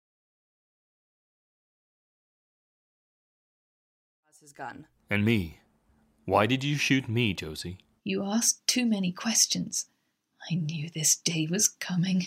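No technical faults can be heard in this speech recording, whose level rises in a smooth, editor-style fade from roughly 4 s until 5.35 s without any click or hard edge.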